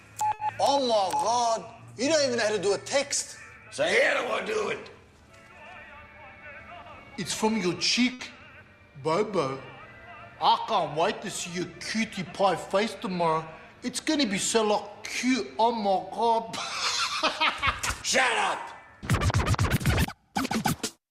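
At 0.33 to 0.41 s and again at 8.13 to 8.21 s, a burst of packet loss leaves about 60 ms with no received data. The receiver extends the preceding sound and fades it over that span, then resumes 60 ms further on, so a stretch of the original is skipped.

At 16.95 to 16.99 s, a short concealed packet loss replaces about 20 ms with a continuation of the preceding signal, blended back into the incoming stream. It is heard as a brief smear across the join.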